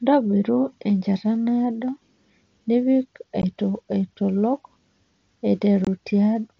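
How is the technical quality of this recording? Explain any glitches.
The recording has two brief dropouts from unconcealed Bluetooth headset packet loss. It is carried over what sounds like the mSBC wideband headset codec, with speech reaching up to about 8 kHz and light graininess on louder passages.

At 3.42 s the speech cuts out for about 15 ms, and from 5.85 to 5.87 s a second gap lasts about 22.5 ms. In each case, short voice packets between headset and phone failed to arrive, and nothing rebuilt the missing audio. Silence or an idle pattern simply filled the space. The result is a small hole with sharp edges that can produce a click.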